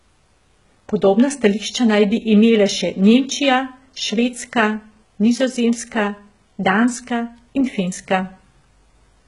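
Throughout the speech, the audio was likely squeezed through HE-AAC compression at a very low bitrate, around 12 kbps by the sound, so the treble is rebuilt rather than coded. Nothing remains above 11.1 kHz, and s sounds come out gritty, metallic or lispy.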